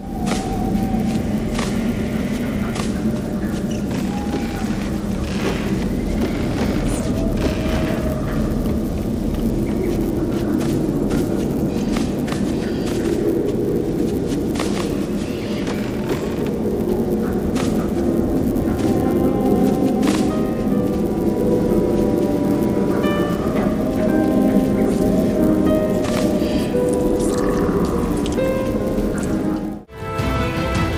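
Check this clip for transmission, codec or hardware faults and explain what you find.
One fault runs through the whole clip: a resampler restarted on every block. The audio was converted from 24 kHz to 48 kHz in 10 ms blocks, each handled alone. Each block edge lacks its true neighbouring samples and gets a small error. At 100 edges per second this forms a 100 Hz buzz, heard only while sound is present.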